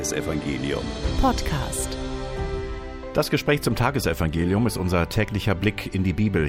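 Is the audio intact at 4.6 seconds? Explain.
Yes, the audio at 4.6 seconds is intact, with no dropout, click, distortion or other fault at that moment.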